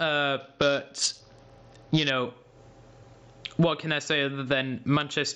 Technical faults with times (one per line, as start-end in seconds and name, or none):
0.00-5.35 gain pumping
0.40-2.10 Bluetooth SBC bit pool drop